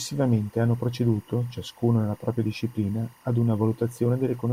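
A faint, steady chirping warble runs behind the speech from start to finish, sitting well below the voice and flickering between two high tones around 1 kHz and 2 kHz. This is timecode bleed: linear timecode from an adjacent track or cable has leaked into the audio path. The code's square wave switches between those two pitches as it encodes bits, and its repeating pattern fits 23.976 frame-per-second timecode.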